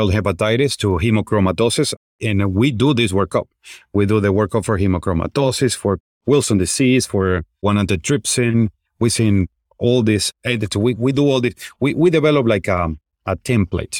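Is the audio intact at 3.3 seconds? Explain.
Yes, the speech at 3.3 seconds is intact, with no dropout, click, distortion or other fault at that moment.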